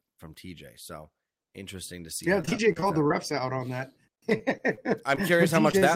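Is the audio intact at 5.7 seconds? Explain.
No. Short concealed packet loss occurs at 5.71 to 5.75 s and again at 5.79 to 5.84 s. Each time about 20 ms of the speech never reached the decoder in time, so the receiver filled the gap by extending the preceding sound, following its pitch or shaping noise, then crossfaded back into the real signal. The two patches last roughly 19 and 26 ms and sound like brief smears or wobbles close together.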